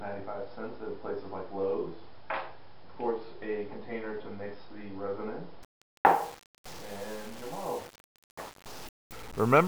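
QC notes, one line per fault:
5.63–9.68 s, low bit depth without dither: from here to the end the sound turns grainy and gritty, with the error tracking the signal, likely from truncating to about 7 bits without dither, leaving distortion only roughly 15 dB below the sound.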